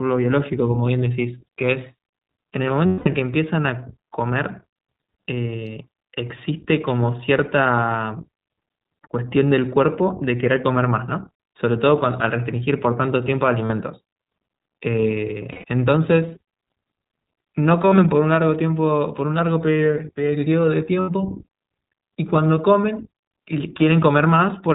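The whole clip of speech carries the sound of the iLBC codec. Nothing above 4 kHz gets through, so the speech is narrowband. Each frame's excitation is coded on its own, and the damage is plainly audible. The voice is clear but rough and slightly synthetic. The coding pattern fits the 20 ms frame mode at about 15.2 kbps.

Lost iLBC frames break in five times. The first runs from 2.86 to 3.08 s, a 200 ms gap. The others are at 13.66 to 13.71 s (40 ms), 15.52 to 15.64 s (120 ms) and 21.00 to 21.10 s (80 ms). From 17.82 to 17.99 s, about 80 ms is lost in short scattered runs, none much longer than a couple of frames. In each gap the decoder repeats the last pitch cycle mixed with noise. It sounds like a held, buzzy vowel, and the 200 ms gap fades as it goes on. The voice returns cleanly almost at once.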